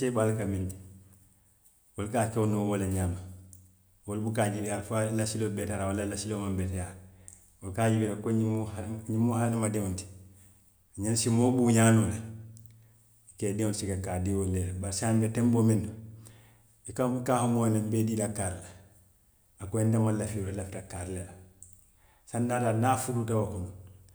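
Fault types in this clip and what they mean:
Nothing in the speech stood out as a fault on listening.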